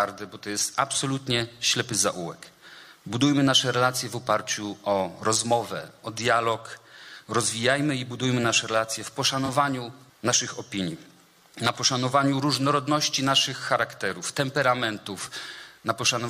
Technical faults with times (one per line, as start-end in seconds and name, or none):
9.46-9.49 corrupt frame concealed